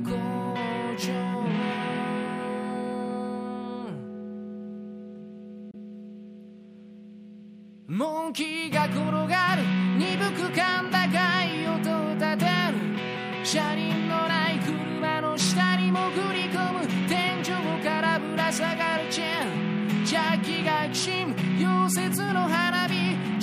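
A brief hole opens in this audio at 5.71 s, ending by 5.75 s, with roughly 23 ms of sound missing, which fits a single lost frame. This is likely a Bluetooth dropout: unlike a buffer underrun, the sound resumes as though it had kept playing, skipping material rather than pausing and picking up where it left off.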